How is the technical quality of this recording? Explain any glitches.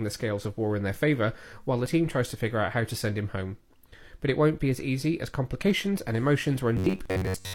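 The recording has three glitches: two brief skips and a robotic ending.

Overlap between stream segments occurs at 1.86 to 1.90 s, after "their favour while the" and before "tries to figure out", and again at 5.84 to 5.88 s, after "be as easy as". The two events are 4.0 s apart, matching the segment length. Where neighbouring segments' time stamps overlapped, the player trimmed about 34 ms and then 42 ms of real speech. Each is heard as a click or tiny skip. A waveform shows an abrupt discontinuity, and a spectrogram shows a thin vertical broadband line.

Robotic sound from repeated short buffers runs from 6.77 to 7.54 s. The speech becomes a rigid metallic buzz near 93.8 Hz, most likely because audio arrived too slowly and the last slice, about 10.7 ms long, was replayed to fill the gaps. Most of the real audio there is skipped. On a spectrogram this looks like evenly spaced horizontal harmonics locked to about 94 Hz, and the waveform shows a short pattern repeating over and over.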